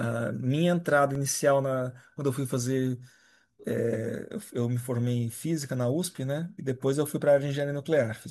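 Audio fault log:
1.15 s, block of digital silence: a short block of samples was replaced by zeros, about 1.3 ms long, which fits a 64-sample block. The speech drops to silence and returns with no fade, so the gap is heard as a tick or dip.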